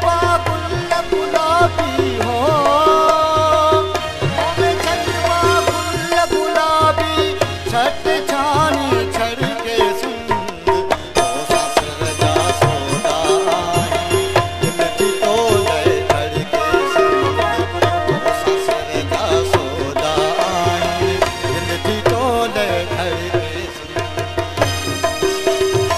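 No technical faults can be heard anywhere in this clip.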